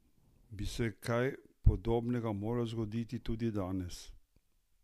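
Nothing in the speech stood out on listening as a technical fault.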